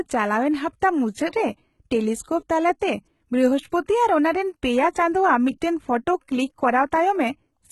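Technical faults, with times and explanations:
Throughout, HE-AAC compression: sibilants sound gritty and metallic rather than dull. The treble is present up to a hard ceiling near 11.8 kHz but rebuilt from copied lower bands, likely from a low bitrate around 16 kbps, unlike a plain low-pass, which would simply darken.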